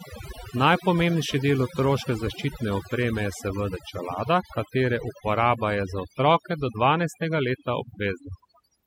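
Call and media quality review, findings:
Overdone noise removal, throughout the speech. Background drops and breaks up into twinkling specks. Probable component: noise suppressor set too aggressive. Mechanism: individual frequency bands near the noise estimate pulled far down or gated off, taking quiet low-level parts of the voice along with the noise. Remaining isolated bins flicker on and off, producing the specks.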